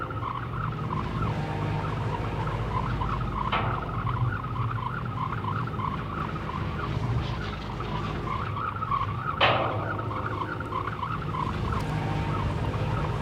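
Loose connector crackle appears from 11.80 to 11.90 s, a burst lasting about a tenth of a second near the end of the audio. A worn or dirty contact somewhere in the signal path is intermittently touching and separating, so the signal is chopped on and off many times within that brief window, and any DC present on the line turns each make and break into a pop. The result is heard as an irregular, scratchy crackle.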